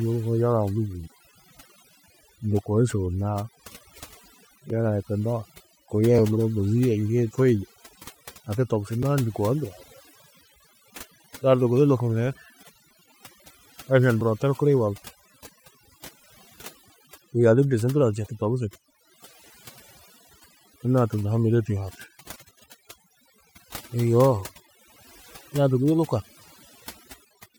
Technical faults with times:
0.00-27.58 overdone noise removal
4.70 block of digital silence
6.18 block of digital silence
9.03 block of digital silence
14.21 block of digital silence

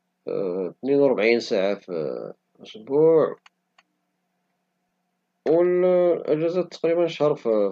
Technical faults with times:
4.89 lost LE Audio frames

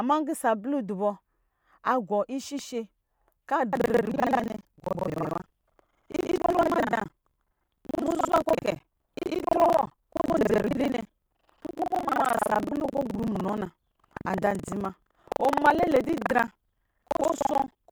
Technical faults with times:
3.71-17.91 buffer tearing

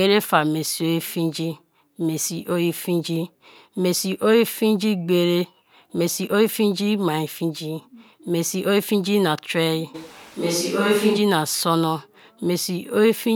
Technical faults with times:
9.96-11.16 switch to a distant microphone

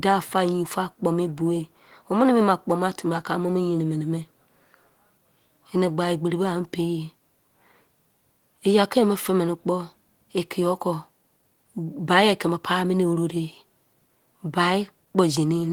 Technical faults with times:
none

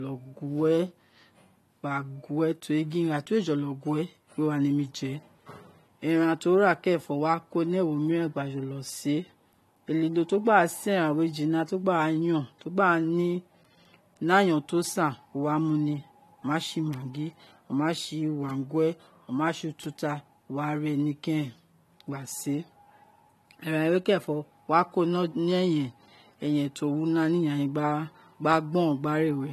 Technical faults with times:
0.00-29.52 transcoding between lossy codecs

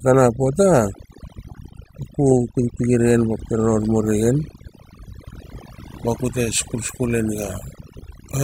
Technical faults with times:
0.00-8.44 overdone noise removal

